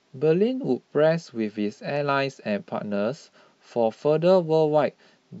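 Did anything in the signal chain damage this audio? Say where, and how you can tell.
No, nothing in the chain has audibly damaged this speech recording at any stage.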